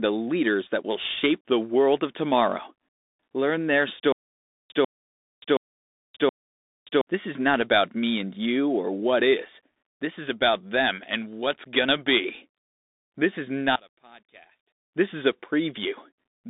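Throughout the clip, the speech carries the sound of a Bluetooth CVSD headset codec. This one-bit delta coder tracks the waveform with an adaptive step, and its damage is plainly audible: scratchy sibilants, distortion on loud bright sounds and a granular hiss. A spectrogram shows a hard ceiling near 3.8 kHz, with energy confined to roughly 200 Hz to 3.7 kHz, which fits 64 kbps CVSD.

From 4.12 to 7.01 s there is a stutter with silent gaps. The same 144 ms burst plays four times at a steady 722 ms period, and each repeat is followed by 578 ms of dead silence. The likely cause is a stalled stream replaying its last fragment and then running dry. On a waveform this appears as identical short blocks separated by flat, near-silent stretches.

From 13.76 to 14.93 s the level falls by about 26 dB, and the speech becomes a faint trace. This fits one channel inverted, likely cancelling the centred content when the channels are summed to mono. 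The waveform collapses toward the baseline, and the spectrogram goes pale across the band for that stretch.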